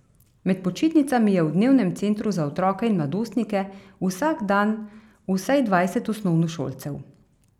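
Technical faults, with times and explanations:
No technical faults heard.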